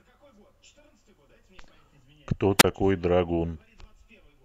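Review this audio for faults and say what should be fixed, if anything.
A wireless microphone squelch dropout occurs from 2.58 to 2.64 s. The analogue FM radio link faded and the receiver's squelch shut the output, so a brief rise of hiss gives way to a near-silent hole of about 32 ms before the speech returns. Keeping clear line of sight between transmitter and receiver, using diversity antennas placed close to the talker, and checking the RF level before recording would prevent it.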